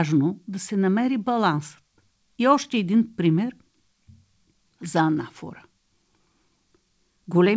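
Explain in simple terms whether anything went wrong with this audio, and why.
Nothing went wrong here: the speech came through a WebRTC call path working as normal, and the lack of any sound above 8 kHz is simply the expected limit of that call connection, not a fault.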